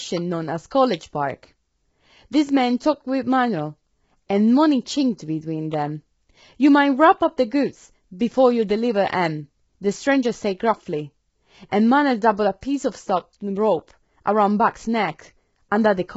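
Speech with heavy coding damage throughout: the voice sounds rough and grainy, noise fills the gaps between harmonics, and nothing is left above 7.7 kHz. That points to low-delay AAC compression, likely AAC-ELD at a very low bitrate around 16 kbps, whose short frames blur pitch detail.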